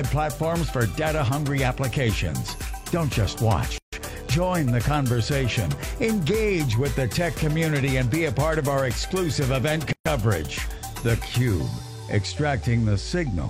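All the way through there's a thin, steady DECT cordless phone buzz at 100 Hz, full of harmonics. A nearby handset or base is bursting every 10 ms and the audio circuit rectifies it, leaving a quiet whine sitting well under the sound.

At 3.78 s a gap at a join of encoded pieces opens, about 146 ms of silence, and another arrives at 9.93 s for about 130 ms, six seconds later. Separately encoded chunks were stitched together untrimmed, so start delay and end padding survive as holes with smeared edges.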